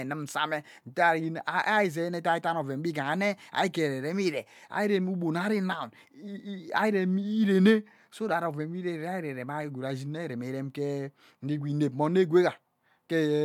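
Nothing stood out as a technical problem on listening to the speech.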